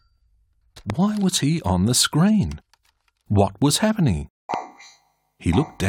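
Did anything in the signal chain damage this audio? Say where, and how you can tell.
Yes. There are two loud pops, at 0.90 to 0.92 s and 4.54 to 4.56 s, each a single sharp thump sitting on top of the sound, which carries on beneath it. They likely come from the analogue wiring stage, where a switch, plug contact or static discharge injects a brief voltage pulse that later circuits shape. The waveform shows an isolated spike roughly 10 dB above the surrounding signal. The spectrogram shows a thin vertical broadband stripe at each time.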